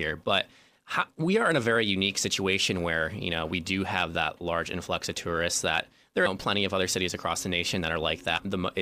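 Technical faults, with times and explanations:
6.25–6.27 s and 8.36–8.39 s, damaged data in a compressed stream: corrupted frames make the decoder lose sync and hunt for the next header, giving a brief glitch between "influx of tourists that" and "plenty of other cities", then another. Each appears as a narrow vertical band on the spectrogram and a jagged waveform discontinuity.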